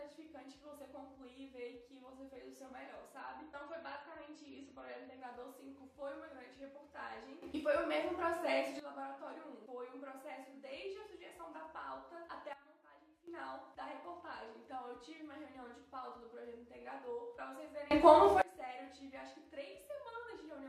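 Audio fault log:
3.2–5.2 s, adaptive stream at a lower bitrate: the top end suddenly vanishes above about 8.4 kHz and the sound turns dull, with no gap at either edge. The stream switched to a lower-bitrate version, which fits MP3 at 32 kbit/s instead of 128 kbit/s.
7.42–8.80 s, 12.53–13.28 s, 17.91–18.42 s, sudden gain jump: the level steps abruptly, up about 12 dB, down about 15 dB, then up about 24 dB, and the background noise shifts with it each time. The likely cause is digital gain changed instantly, without a ramp.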